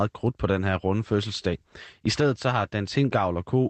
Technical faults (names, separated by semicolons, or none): none